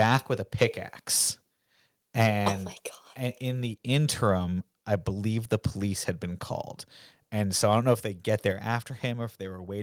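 Microphone overload from 0.00 to 0.16 s, just before "with a", and again from 2.19 to 2.48 s: the input was likely set too high, driving peaks about 6 dB past the converter's limit so their tops are sheared off, leaving a harsh crackle on the loudest moments. Microphone volume stepped down at 2.52 s, right after that second distorted burst, and again at 8.52 s, just after "if they get": the call software likely cut the device's input gain in a single step, so the voice and background drop abruptly, by about 4 dB and then about 5 dB.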